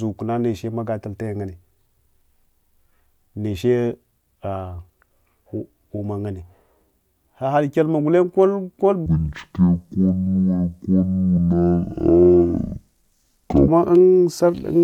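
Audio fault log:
9.06–13.68 s, stereo read as mono: the interleaved left and right samples are taken as one channel, so the speech plays at half speed and an octave low, 12 semitones down. On a spectrogram the harmonics sit compressed toward the bottom, with a fainter mirrored copy in the upper half.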